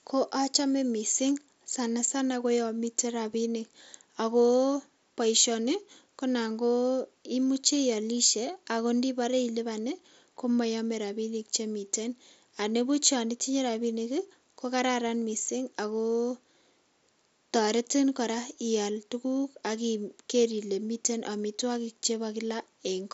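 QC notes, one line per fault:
The speech comes through a Bluetooth mSBC headset codec path, so the band stops at 8 kHz, with a light grain on louder passages and some flicker in the weakest upper bands, both typical of that wideband link.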